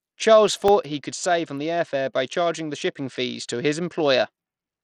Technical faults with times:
0.00-4.83 Bluetooth SBC compression
0.47-0.68 processor overload crackle

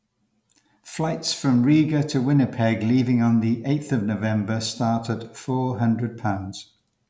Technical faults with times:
none

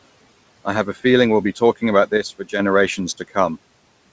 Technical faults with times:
2.17-2.59 one channel drops out

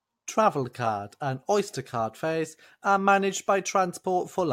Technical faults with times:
none

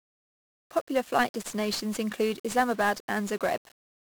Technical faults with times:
0.00-4.06 1-bit DFPWM compression

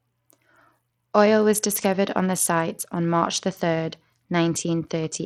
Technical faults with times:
0.00-5.25 Bluetooth SBC compression

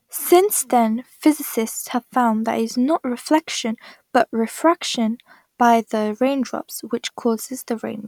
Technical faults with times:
none

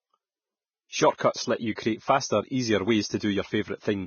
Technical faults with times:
0.00-4.07 Vorbis compression
1.16-1.20 pre-echo

